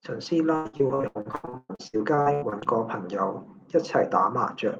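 From 0.55 to 2.67 s, repeated packet loss (robotic sound) breaks up the speech. Over twenty short gaps follow one another, the longest about 0.12 s. Each is patched by stretching the last sound, so nearly half the stretch is filled in. The speech turns choppy, with pieces missing.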